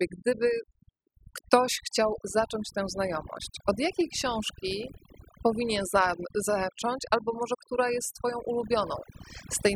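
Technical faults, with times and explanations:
Throughout, overdone noise removal: the noise reduction was set too aggressively, so frequency bands near its noise estimate are cut far down or switched off, taking quiet parts of the speech with them; the background falls away and breaks into twinkling, warbling specks.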